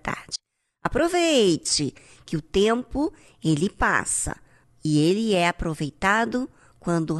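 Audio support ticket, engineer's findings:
Audio dropout to a faint residue, 0.36–0.85 s: speech cuts abruptly for about half a second, faint leak roughly 35 dB down remains. Likely a signal-path interruption with the downstream chain still live.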